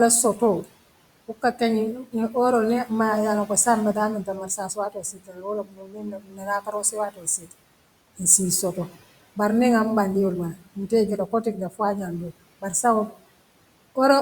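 Parts of the speech sound swallowed and faint at 0.37–0.72 s, 1.28–1.61 s, 3.94–7.53 s (just after "maayaa loŋko saaňe mbe", the longest, with about two seconds affected), 11.27–11.8 s and 12.3–13.23 s. The drops reach about 13 to 19 dB. This is speech cut by the noise suppressor, which mistook quieter speech for the room noise sitting about 21 dB below it and turned it down.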